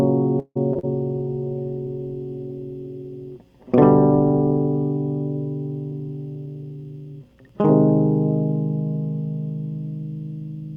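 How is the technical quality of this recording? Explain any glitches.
The recording has three kinds of network fault, all in the first 6.1 seconds of this music clip.

Call audio freeze, 0.39 to 0.57 s: packets were likely held up in transit until the jitter buffer ran dry. For about 160 ms the last sound is stretched into a fading tail that ends in roughly 50 ms of silence. The music then resumes where it paused, 161 ms late, with nothing lost.

Short concealed packet loss, 0.73 to 0.77 s and 0.79 to 0.85 s: about 20 ms and then 40 ms of audio never reached the decoder in time. The receiver continued the preceding sound and blended back into the real signal, so each point has a brief smear or wobble.

Call bitrate drop, 0.89 to 6.12 s: the bandwidth estimate fell and the encoder went from 96 kbps to 26 kbps, staying at the lowest rate for about 3.4 s. The coarser coding makes the music sound rough until the rate recovers.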